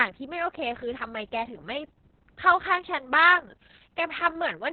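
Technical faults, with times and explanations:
Throughout, Opus voice compression. The speech is cut off above 4 kHz and sounds muffled, hoarse and robotic, which fits coarse SILK coding near 6 kbps.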